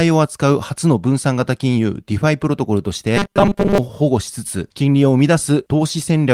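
From 3.17 to 3.78 s the speech turns into a rigid, metallic 200 Hz buzz: robotic sound from repeated short buffers, likely a 5 ms chunk replayed while most real audio is skipped. Spectrograms show evenly spaced 200 Hz harmonic stripes, and the waveform shows identical repeating cycles.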